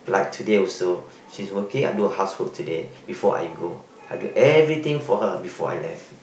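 Nothing technically wrong turns up in this speech recording; it has simply gone through an ordinary Opus call path, with the top end tapering off around 8 kHz as that codec setting normally does.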